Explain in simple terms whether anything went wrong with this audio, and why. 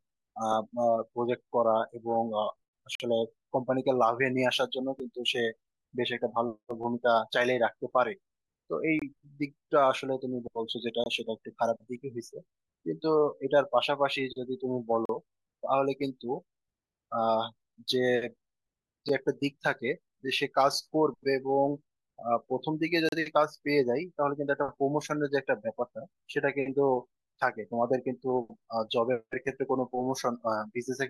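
The speech keeps dropping out for a split second, and those are gaps between stream segments. The audio arrives in 2-second chunks, and a few chunks don't quite line up, so the player fills the gap with silence. You get abrupt holes at about 2.95–3.00 s, 5.00 s, 8.99–9.02 s, 11.04–11.06 s, 15.05–15.09 s, 19.09 s and 23.09–23.12 s. They range from a few milliseconds to nearly 50 ms. Nothing is actually lost, just paused.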